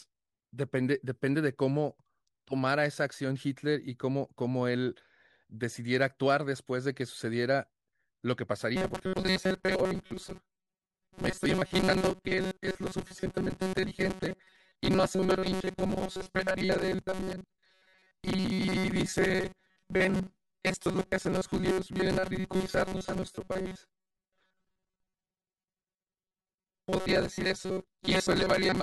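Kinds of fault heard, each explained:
Robotic sound from repeated short buffers: from 8.76 s to the end, the speech turns into a rigid, metallic buzz locked at 188 Hz that only loosely tracks the speech. The likely cause is new audio arriving too rarely, so the playback fills the gaps by looping the last tiny slice, about 5.3 ms long, which fits the 188 Hz pitch. Roughly 70% of what is heard is repetition, with the real audio in between skipped.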